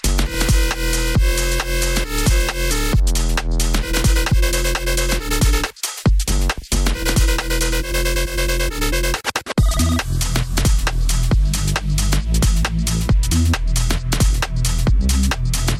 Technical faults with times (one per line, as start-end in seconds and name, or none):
4.31 skip ahead
7.80-10.12 jitter buffer speed-up